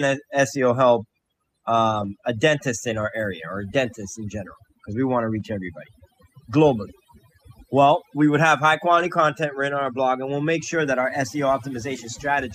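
Noise reduction set far too aggressively runs across the whole recording. It pulls individual frequency bands down or out wherever they sit close to its noise estimate, and the softer parts of the speech are cut along with the noise. This overdone noise removal leaves the background lowered and broken up into twinkling specks.

At five points, audio lost in transmission is filled in from a low-bitrate backup copy carried in the following packet. These are lost packets rebuilt from error correction, so there is no gap, but the patched stretches sound rougher and noisier. The longest runs from 1.91 to 2.05 s, just before "a dentist in", where four separate packets, 80 ms in all, were replaced. Shorter patches follow at 3.01 to 3.03 s and at 5.39 s. Another falls at 8.99 to 9.05 s, between "we would have high" and "content written on our". The last, at 11.01 to 11.03 s, comes right after "we'll make sure that".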